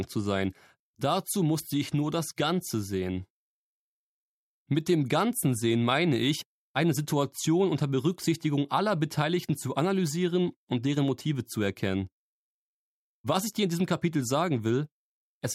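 Nothing stood out on listening; no technical fault could be heard at any point in the audio.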